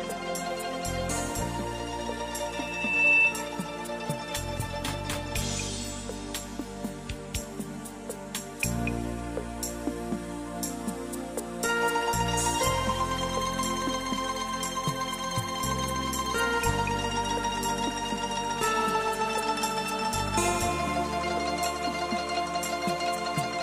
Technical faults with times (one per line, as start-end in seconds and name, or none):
2.48-3.39 loudspeaker feedback squeal